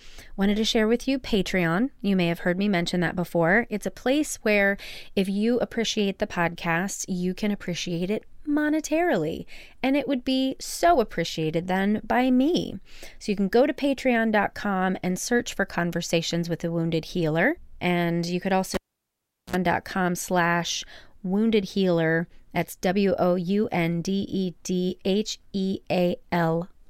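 At 18.74 s, after "you could", a cable pulled and plugged in: a pop, about 0.77 s of near silence, then roughly 59 ms of 60 Hz mains buzz as the plug tip makes partial contact, and a second pop before speech resumes at 19.56 s with "slash wounded healer that's".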